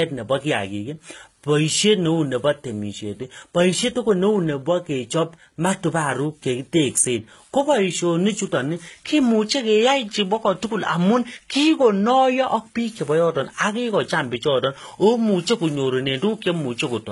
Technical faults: transcoding between lossy codecs

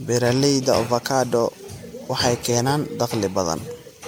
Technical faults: generation loss

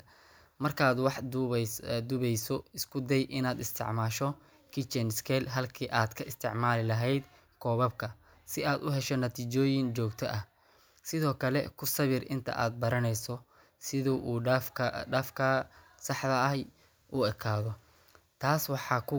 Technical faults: none

